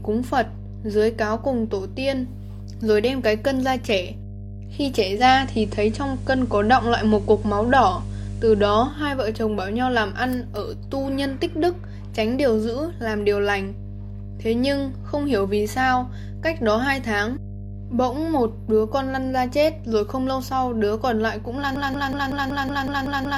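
A mains hum runs through the whole recording: a steady 50 Hz tone, roughly 10 dB below the signal, picked up from the power line through a ground loop or nearby transformer. On a spectrogram it is a bright horizontal line at 50 Hz, with fainter harmonic lines above it.

From 5.14 s to 8.99 s the digital radio blends to analogue FM. A 146 ms cross-fade brings in hiss around 35 dB down, and the level shifts by about 4 dB. The spectrogram shows a raised noise floor throughout that span.

At 21.76 s a broken-record loop begins and runs to the end: a 0.19 s fragment repeats exactly nine times back to back, likely because the player or stream stalled on its last buffer. The waveform shows identical blocks, tiled at even intervals.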